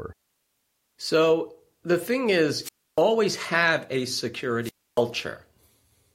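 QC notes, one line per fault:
2.61–3.02 s and 4.62–5.02 s, wireless microphone squelch dropout: after "the thing" and again after "have a", hiss swells, then the receiver's squelch mutes a fading FM signal for about 290 ms and 280 ms. That rising static before the hole marks a radio fade, not a clean digital gap.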